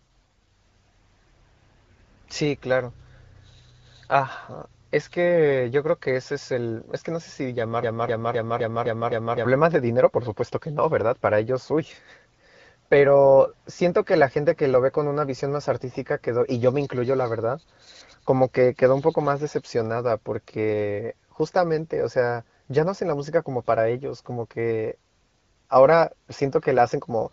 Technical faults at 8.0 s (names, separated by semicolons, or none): broken-record loop